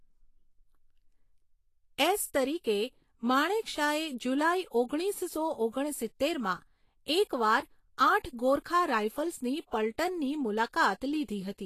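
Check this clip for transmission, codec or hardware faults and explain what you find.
One fault runs through the whole speech clip: Vorbis compression. Nothing survives above 14.2 kHz, and the treble below that is plainly hissy and grainy, with roughened tones and softened attacks. The likely cause is an encoder coarsely quantising the residue over a smooth floor, consistent with a low bitrate near 34 kbps. A plain low-pass filter would leave the remaining treble clean rather than replacing its detail with noise.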